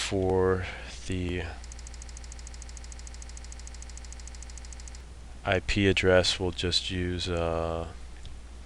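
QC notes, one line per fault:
1.76–5.01 s, broken-record loop: a 150 ms fragment repeats exactly, back to back, 22 times. It sounds like a stuck stutter. The player or stream likely stalled and kept resending its last held piece. The audio meant for those three seconds is lost.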